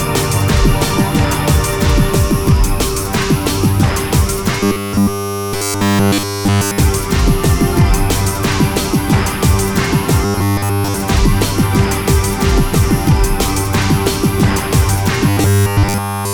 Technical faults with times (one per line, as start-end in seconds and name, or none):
4.60-6.78 robotic sound from repeated short buffers
10.25-10.94 robotic sound from repeated short buffers
15.29-16.33 robotic sound from repeated short buffers